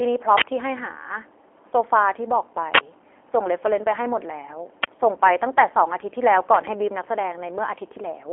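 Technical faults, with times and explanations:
Throughout, G.729 codec: the whole clip has that narrow telephone-line character, with almost nothing above 3.7 kHz and the band sitting roughly between 300 Hz and 3.4 kHz. The speech keeps a slightly rough, synthetic edge because the codec rebuilds it from a vocal tract model, a pitch guess and a handful of pulses per frame rather than sending the waveform itself. The damage is plainly audible, and the sound fits the 8 kbit/s G.729A variant.
6.54 to 6.71 s, loud pop: two sharp pops land in quick succession here, standing out well above the speech, which keeps going underneath without a break. A sudden voltage step or pulse got into the signal, most likely from a plug, a switch or a bit of static, and the circuitry after it shaped each pulse into that punchy click-thump. The two hits over about 170 ms sound like a single event that jolted the line twice.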